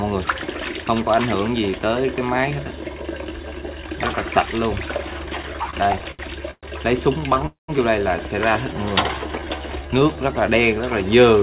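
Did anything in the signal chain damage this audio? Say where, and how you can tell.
Yes. The damage happened at the network and jitter-buffer stage of a narrowband call path; the band stopping at 4 kHz fits G.711 mu-law.

Repeated stalls (stutter) run from 5.42 to 6.65 s, with about a dozen brief holds, the longest 119 ms, filling roughly a quarter of that span. A shorter burst follows from 7.21 to 7.42 s. Each hold extends the last sound rather than dropping audio. Repeated short holds set this apart from a single freeze.

A call audio freeze runs from 7.46 to 7.70 s. The sound is stretched and fades, then about 150 ms sits near silence before the audio resumes where it left off, about 222 ms later than it would have. One long fading gap suggests packets likely held up in transit.

Jitter buffer slow-down runs from 9.19 to 10.34 s. The sound plays at about 85% speed, adding 178 ms, while the pitch stays unchanged. 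Repeated pitch periods draw the sound out with no gaps, unlike the stalls.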